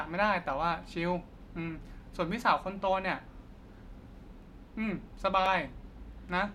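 From 3.40 s to 6.48 s the speech is hit by periodic USB or driver dropouts. A short tick lands about every 1.02 s, around four in all. Each one is a tiny gap of roughly a millisecond. The audio there is skipped, not filled with silence. Something in the system seems to stall the USB bus or audio driver at a fixed interval. The evenly spaced ticks give away the cause.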